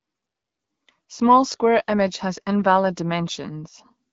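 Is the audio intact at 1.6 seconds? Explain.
Yes, the audio is intact at 1.6 seconds, with the speech carried cleanly through the AMR wideband (HD Voice) codec and no fault at that moment.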